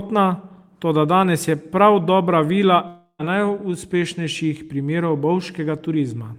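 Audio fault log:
2.87–3.21 s, long network dropout: about 320 ms of speech never arrives; the last sound is stretched into a fading buzz, then briefly silent, likely from lost packets.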